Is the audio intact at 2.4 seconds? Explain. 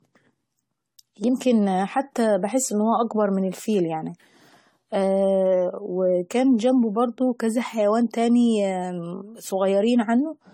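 No, at 2.4 s the speech shows generation loss throughout: it sounds swirly, hollow and smeared with blurred attacks, likely from around ten AAC-LC re-encodes near 64 kbit/s. A spectrogram shows accumulating holes and nothing above 19.9 kHz.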